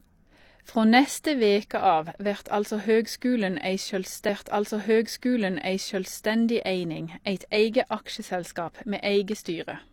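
At 4.25 s a stream segment is repeated: the player queued the same chunk of speech twice, so about 2.0 s of programme, up to 6.25 s, plays again. A small blip marks the jump back where the duplicate segment begins.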